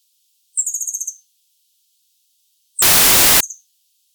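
From 2.82 to 3.41 s, samples built from the wrong bytes turn the sound into loud, harsh broadband noise, low bits becoming high ones.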